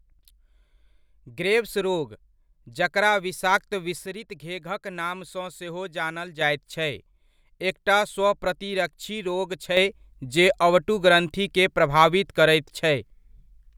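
A sudden gain jump at 4.06 s drops the speech and its background noise together by about 6 dB until 6.41 s. Another at 9.77 s lifts both by about 7 dB through the end. Each step is instant, likely from a gain change applied without a ramp.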